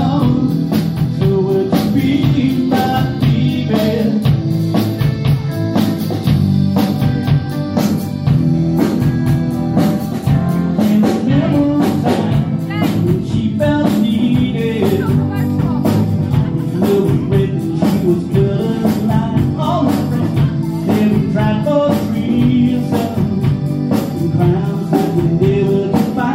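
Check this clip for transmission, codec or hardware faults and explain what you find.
Nothing in the signal points to a transmission, codec or hardware problem; it stays continuous and stable throughout, with no audible disturbance introduced along the path.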